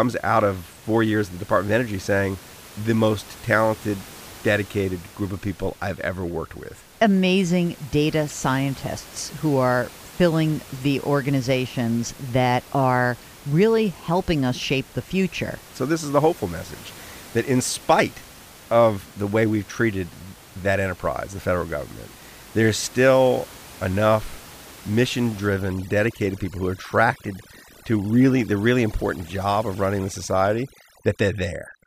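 From 25.47 s to the end of the clip, after "there's still enough mission", overdone noise removal takes hold. An overly aggressive suppressor shuts off bands near its noise estimate, leaving near-silent gaps with twinkling specks. That separates it from room noise, which sits about 22 dB below the speech.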